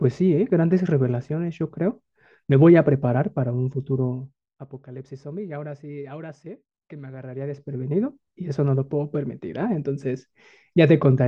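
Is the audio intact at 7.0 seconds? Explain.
Yes, at 7.0 seconds the speech is intact, with no fault at that moment.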